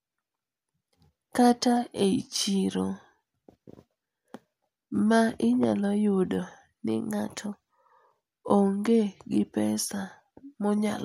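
Around 7.11 s the speech suddenly runs fast and sharp, roughly 5.7% quicker and pitched up by about 96 cents, just shy of a semitone. It holds there until 7.90 s and then snaps straight back to normal. That pattern is likely a drift correction step, where clock-matching software jumps the playback rate in one go to drain a filling buffer, so speed and pitch move together rather than one alone.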